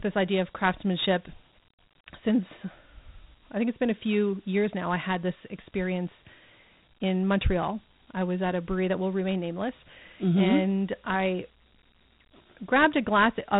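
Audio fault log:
Throughout, Dialogic VOX ADPCM: nothing above 3.9 kHz, and plainly audible gritty hiss rides on the speech itself, unlike clean band-limiting; fits 4-bit samples at 8 kHz.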